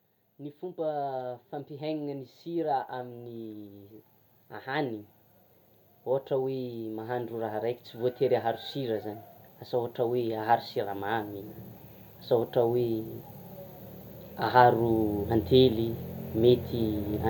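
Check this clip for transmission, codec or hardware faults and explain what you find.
Automatic gain rising occurs three times in this speech. From 0.38 to 3.96 s the level climbs by about 8 dB, from 6.04 to 9.08 s by about 6 dB, and from 9.71 to 11.38 s by about 4 dB. Each time the gain control judged the input too quiet and stepped its gain up slowly, so the voice and the background noise swell together over one to several seconds rather than jumping.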